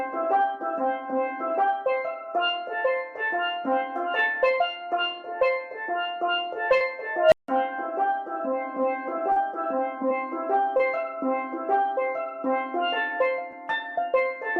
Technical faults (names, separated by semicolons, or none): short concealed packet loss; unstable filter